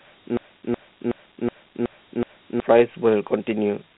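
Throughout, the speech carries Dialogic VOX ADPCM damage: a gritty hiss trails the speech, and nothing sounds above 3.9 kHz, consistent with roughly 32 kbps 4-bit OKI coding. On a spectrogram, energy stops at a flat ceiling, with grainy noise filling the gaps between formants.

From 0.37 to 2.60 s, a system hang loop repeats one 0.37 s slice, a 16,384-sample buffer, six times at 2.69 Hz. About two seconds of speech are lost. The waveform shows identical blocks tiled end to end.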